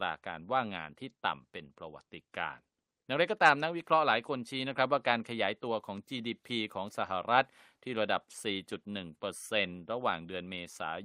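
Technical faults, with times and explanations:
No technical faults detected anywhere in the clip.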